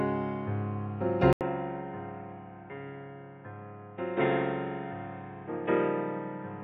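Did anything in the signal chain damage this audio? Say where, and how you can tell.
Yes. At 1.33 s an 80 ms gap gives way to duller, quieter sound capped at 3.7 kHz, likely the input switched to a poorer capture device.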